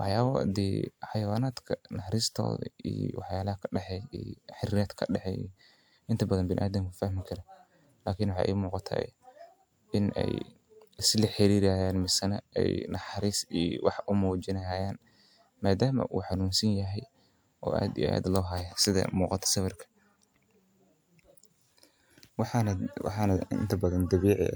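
No technical faults can be heard at any point in the speech.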